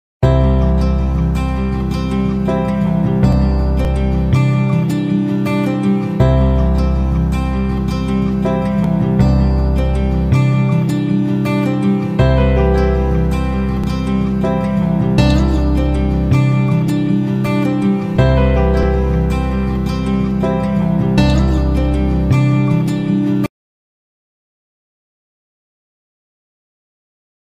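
The audio has brief skips at 3.85, 8.84, 13.84 and 18.83 s, likely audio missing between chunks. Their strict 5-second spacing and gapless joins, each losing a few milliseconds, distinguish them from random dropouts.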